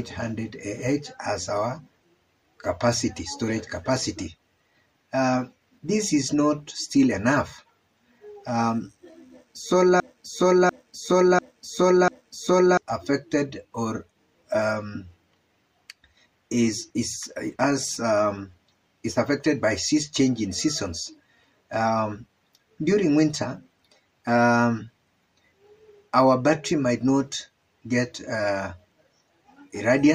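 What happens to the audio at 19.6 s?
Nothing goes wrong at 19.6 s; the audio there plays through intact, with no dropout, click or other fault.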